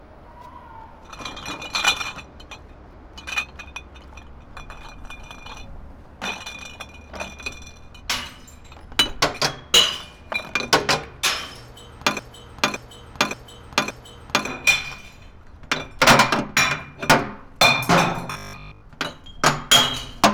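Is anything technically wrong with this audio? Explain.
Yes, there are two faults.

From 12.19 to 14.48 s there is a broken-record loop. A 0.57 s fragment plays four times in a row, exactly the same each time. The stream likely stalled and kept resending its last fragment. The audio that belonged in that span is gone.

From 18.32 to 18.86 s there is robotic sound from repeated short buffers. A rigid 50 Hz metallic buzz replaces the natural texture. That rate fits a 20 ms chunk being replayed, likely because new data arrived too slowly. Most of the real audio in that stretch is skipped.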